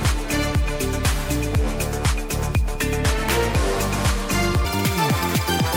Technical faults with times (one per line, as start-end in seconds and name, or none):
4.65-5.76 section at the wrong speed